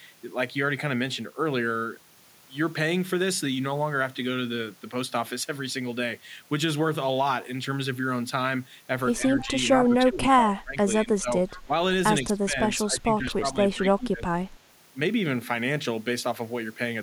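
From 9.39 to 9.46 s an echo leak puts a faint copy of the speech about 143 ms behind the original, roughly 20 dB down. It most likely comes from a far-end loudspeaker whose echo canceller let some of its microphone pickup return down the line. Almost at once, from 9.45 to 9.52 s, the speech suffers speech suppression in double talk, dipping about 10 dB. This is likely the canceller turning down the near talker along with the echo while both sides were active. The same suppression returns at 9.77–10.77 s, where the level falls by around 20 dB over most of that second, and again at 10.96–11.29 s, also around 20 dB down. A second echo leak at 11.51–11.63 s, still at 143 ms delay but fainter at about 25 dB below the speech, is followed by a brief dip of about 15 dB at 11.66–11.72 s. The longest suppressed stretch runs from 12.24 to 14.3 s, with about one and a half seconds of it pulled down by up to roughly 15 dB, so the speech sounds recessed. 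Inside that stretch, at 14.0–14.04 s, a last trace of the 143 ms echo slips through, very faint at about 35 dB down.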